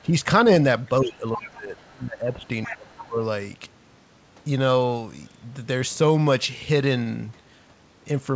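From 0.04 to 0.13 s the talker dips by about 5 dB. This is speech suppressed in double talk, likely because the echo canceller heard both sides at once and turned everything down.

At 0.44 to 0.48 s comes a short concealed packet loss. About 20 ms of audio arrived too late. The receiver extended the previous sound to fill the gap and blended back in, leaving a brief smear.

From 1.01 to 2.46 s the suppression returns and is much deeper, falling by about 20 dB. During it, the other side's voice leaks through at 1.38 to 1.51 s, 1.78 to 1.89 s and 2.44 to 2.48 s. The first scrap is fairly clear, at about 15 dB below the talker. The next two are faint. The echo canceller likely left loudspeaker sound in the microphone.

More leakage follows at 2.65 to 2.77 s, at about 15 dB down. From 2.67 to 3.17 s the talker is pushed down again, by about 25 dB at the deepest point. Inside that stretch, at 2.98 to 3.05 s, the other voice comes through at about 20 dB down. 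The call band stops near 8 kHz, which fits G.722.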